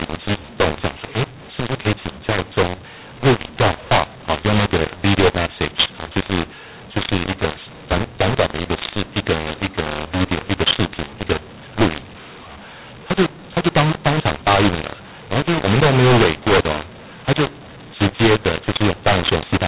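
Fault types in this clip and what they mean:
mu-law and A-law mixed up: speech coded with G.711 A-law is decoded as mu-law throughout, scrambling sample levels and lifting the quietest well above silence. The result is harsh distortion with noise filling the pauses, unlike normal G.711 quantisation noise, which stays faint and follows the signal.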